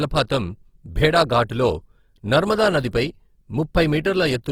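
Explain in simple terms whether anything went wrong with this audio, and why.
Opus compression, throughout the clip: the speech sounds grainy and rough, likely because the encoder ran short of data and filled the missing detail with noise.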